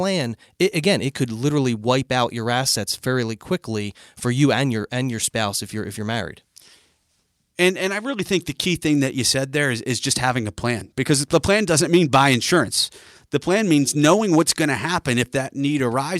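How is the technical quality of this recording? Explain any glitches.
No technical glitches are audible anywhere in the recording.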